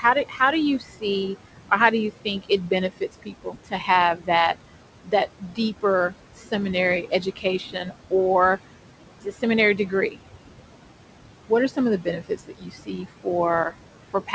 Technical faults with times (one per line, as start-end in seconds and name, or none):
0.00-14.34 noise suppressor artifacts
0.01-4.29 speech cut by the noise suppressor
5.04-8.58 speech cut by the noise suppressor
9.21-10.18 speech cut by the noise suppressor
11.49-14.34 speech cut by the noise suppressor